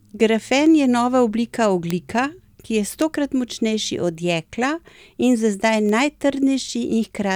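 Bit error spikes at 0.66 s (just before "je nova"), 1.90, 3.02 and 5.89 s: a flipped bit throws a sample or a few by a power of two, producing broadband ticks peaking around -20 to -8 dBFS.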